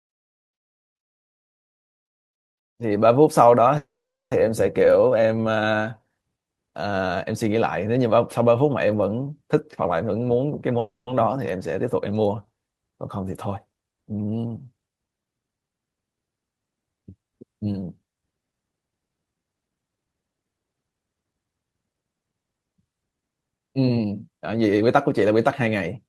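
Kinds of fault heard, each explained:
Call audio freeze: At 3.77 s the sound stalls for about 0.54 s. A brief tail of the last sound decays into roughly 0.44 s of silence, and the audio then resumes where it left off with nothing lost. At 10.79 s a shorter 0.28 s stall leaves about 0.14 s silent. The likely cause is delayed packets draining the jitter buffer, so the receiver stretched the last sound until the data arrived.
Jitter buffer speed-up: Four stretches play fast at unchanged pitch: 9.54–10.72 s at 107%, 14.73–15.86 s at 113%, 18.87–20.15 s at 114%, and 23.52–26.05 s at 109%. The receiver is trimming pitch-period-length pieces in quick succession to shrink an overfilled buffer, taking out roughly a tenth to a fifth of a second in each passage. The speech sounds hurried through these passages.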